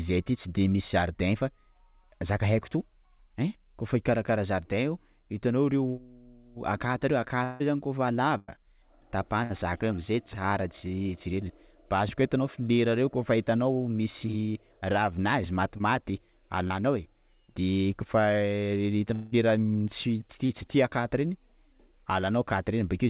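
At 7.44 to 7.62 s, just before "reo zany", about 160 ms of speech is gone, most likely from a long network dropout. The receiver covers the whole gap by extending the last sound as a fading buzz or hiss with no true silence. The speech then resumes further on, with the lost stretch absent. The audio is band-limited with nothing above 4 kHz, which fits G.711 A-law at 64 kbps.

A burst of packet loss follows at 8.38 to 8.50 s, removing 100 ms. The decoder continues the preceding sound and turns it down across the hole, so it comes across as a held, decaying buzz or hiss before the speech picks up again past the missing part. A second, shorter burst at 9.44 to 9.52 s removes 60 ms and sounds the same, only briefer.

Short concealed packet loss appears at 15.78 to 15.82 s, right after "misy ravinazy", and again at 16.68 to 16.72 s, each losing 20 ms. The receiver patches these small holes by carrying the last sound forward and blending back into the real signal. 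Each one is heard as a momentary smear or wobble.

At 19.14 to 19.34 s, about 180 ms disappears in what is again likely a long network dropout. It is filled throughout with a fading continuation of the preceding sound and has no silent stretch. The speech returns later in its course, missing that section.

A final short concealed packet loss at 20.46 to 20.51 s drops 40 ms. It is the longest of the three, heard as a brief smear or wobble in the speech.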